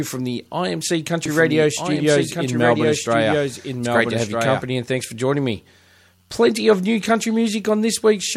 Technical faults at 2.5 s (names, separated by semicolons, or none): doubled audio track